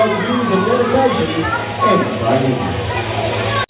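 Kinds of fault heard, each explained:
No faults heard; the audio reflects an ordinary call path with content stopping at about 4 kHz, consistent with a narrowband codec such as G.711.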